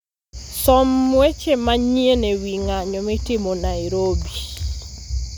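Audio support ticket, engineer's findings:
Listened through the speech recording and found nothing to report, so no faults to log on this one.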